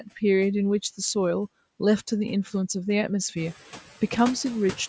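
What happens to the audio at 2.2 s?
At 2.2 s, noise suppressor artifacts are present, as they are across the whole clip. The suppressor pulls down bands it judges to be steady noise, by about 9 dB, frame by frame. The background noise sinks between the words and rises under them.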